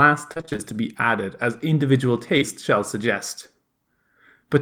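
Repeated packet loss, with its robotic sound, runs from 0.33 to 0.74 s. Over that stretch the audio drops out again and again, about seven short holes, none longer than about 24 ms, adding up to roughly 140 ms missing. The decoder papers over each one by extending the preceding sound, so nearly half of this span is synthetic fill. The speech turns choppy, with fragments clipped out between the patched stretches.

Short concealed packet loss follows at 2.38 to 2.43 s. About 40 ms of audio failed to arrive in time, and the receiver filled roughly 36 ms of it by carrying the previous sound forward before blending back into the real signal. The result is a brief smear or wobble in the speech, a momentary blur where the original detail is replaced by continued sound.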